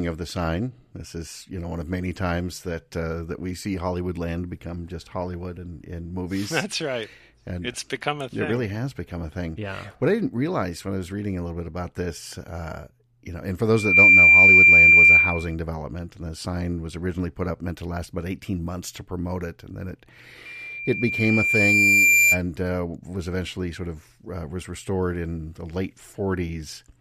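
Loudspeaker feedback squeal hits at 13.74 to 15.55 s, a 2.4 kHz tone jumping up almost instantly to about 15 dB over the speech, then again at 20.45 to 22.41 s, swelling more slowly to about 10 dB above. The mic is hearing its own speaker and the loop runs away at that one frequency.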